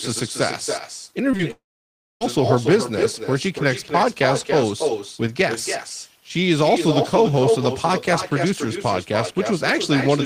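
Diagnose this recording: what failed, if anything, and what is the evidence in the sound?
Echo with no canceller runs through the whole clip, a call-processing failure. Every stretch of speech is trailed by a quieter, thinner copy arriving roughly a third of a second later, about 6 dB below the direct speech. The far end's loudspeaker is feeding its own microphone, and with no echo canceller removing that path, the talker's own speech returns after the network round trip.

Short concealed packet loss occurs twice in quick succession, at 1.31 to 1.35 s and again at 1.37 to 1.41 s, on the network and decoder side. Each gap is about 20 ms of audio that arrived too late to play. The receiver filled each hole by extending the preceding sound and then blended back into the real signal. The result is a pair of brief smears or wobbles only hundredths of a second apart.

A long network dropout follows almost immediately, from 1.51 to 2.23 s, roughly 0.7 s of missing audio. 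The sound first carries on briefly as a fading continuation of what came before, then falls to silence for most of the gap, about 0.6 s, before speech resumes further along with that portion gone. This is likely a network stall, where the receiver's concealment ran out and it muted until packets returned.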